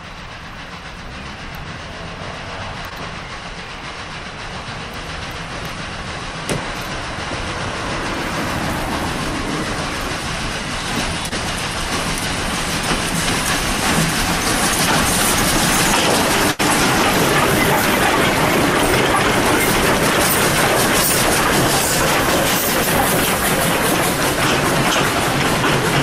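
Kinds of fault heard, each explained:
Short concealed packet loss: gaps of 14 and 22 ms, each losing 20 ms of audio, were filled by extending the preceding sound, heard as brief smears or wobbles at 2.89 s and 11.29 s.
Burst of packet loss: 80 ms went missing from 16.51 to 16.61 s; the last sound was stretched and faded before playback resumed further on.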